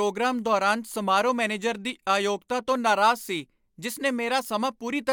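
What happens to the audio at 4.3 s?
Nothing goes wrong at 4.3 s; the speech carries on intact through that moment, with no dropout, click or distortion.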